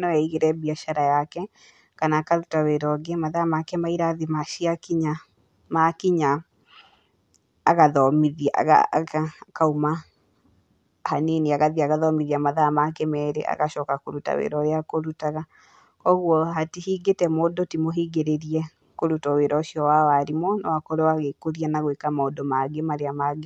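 The speech in this recording shows no audible technical faults.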